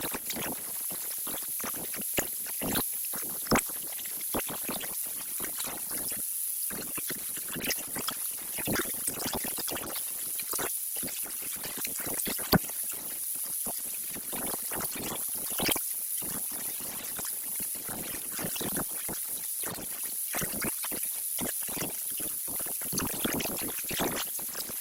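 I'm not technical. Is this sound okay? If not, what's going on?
No. From about 4.78 s to 22.78 s you get an adaptive stream at a lower bitrate: the connection slowed, so the player switched to a thinner version. The sound picks up more digital roughness, then snaps back without any gap.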